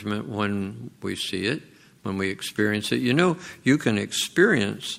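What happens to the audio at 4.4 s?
Nothing goes wrong at 4.4 s; the audio plays through that moment intact, with no fault to be heard.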